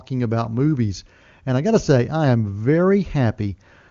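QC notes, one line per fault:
Nothing stood out on listening to this speech clip.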